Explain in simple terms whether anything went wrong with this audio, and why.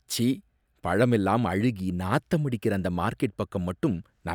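Nothing went wrong with this audio. It's a short piece of speech with no technical faults to point out.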